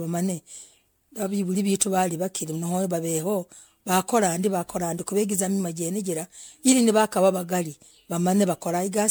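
From start to finish the speech has a swirly, watery smear and a hollow, scooped-out quality, with consonant attacks blurred and nothing above about 19.9 kHz. This is generation loss, likely from repeated lossy coding: the sound fits MP3 at around 128 kbit/s decoded and re-encoded roughly seven times, each pass quantising on a shifted frame grid so noise and spectral holes pile up well beyond what that bitrate alone would leave.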